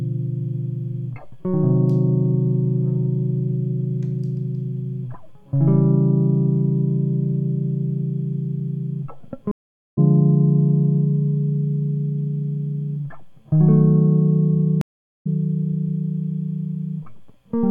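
At 9.51 s and again at 14.81 s the music cuts out for 0.46 s and 0.44 s. These are stream reconnects: the link dropped, and a new decoder rejoined the stream roughly 0.4 s and 0.5 s further on. Each gap shows as a flat, blank column in the waveform and spectrogram.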